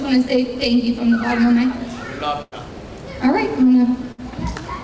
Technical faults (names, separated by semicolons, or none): burst of packet loss